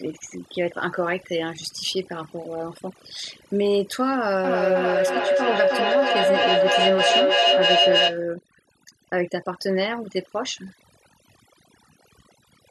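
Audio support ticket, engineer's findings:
Overdone noise removal, whole clip. Background gated down, breaking into twinkling specks. Noise suppressor set too aggressive, cutting bands near its noise estimate, quiet speech detail included. Spectrogram: blank gaps, isolated musical-noise dots, ragged holes in voice harmonics.

Feedback echo between two devices, 4.44 to 8.26 s. Speech returns roughly every 0.3 s, thinner and ringing, building rather than decaying, peaking about 5 dB above the speech. Second device's playback re-entering the other's mic, outside its echo canceller. Waveform: stacked, evenly spaced copies.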